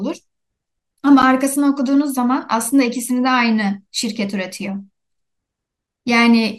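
Speech clip with one block of digital silence at 1.22 s, a 10.7 ms dropout short enough to be heard as a tick or dip, which fits a 512-sample buffer not filled in time.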